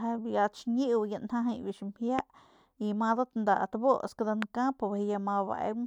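A loud pop sits over the speech from 2.19 to 2.21 s, peaking around 20 dB above the surrounding signal, and a second, somewhat weaker one follows from 4.42 to 4.44 s at about 15 dB. Each is a single sharp click-thump with the speech continuing underneath. The likely cause is a brief voltage step or pulse entering the chain, from a connector, switch, static discharge or driver glitch, which the downstream circuitry then shapes into a short transient.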